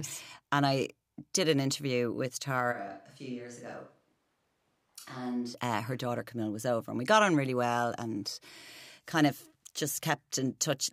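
Speech where, after "did an interview with", 2.74–5.53 s abruptly turns hollow, roomy and thin, about 10 dB quieter until "uh her daughter", likely a switch to a distant microphone; the sudden switch distinguishes it from gradual level fades.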